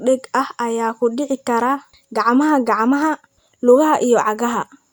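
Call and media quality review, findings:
Call and media quality review findings: no faults heard in this speech clip.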